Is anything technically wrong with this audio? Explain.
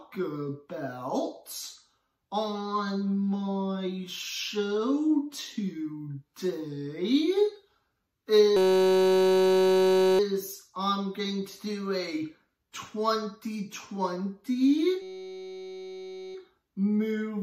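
Yes. A system hang loop happens twice, from 8.57 to 10.19 s and again from 15.02 to 16.35 s. Each time, the playback stalls and the sound hardware keeps replaying one tiny slice of its buffer. That slice is 5.33 ms long, which fits a 256-sample buffer. It repeats at 188 Hz, so the sound turns into a steady, flat buzz pitched near 188 Hz. The first buzz lasts about 1.6 s, the second about 1.3 s.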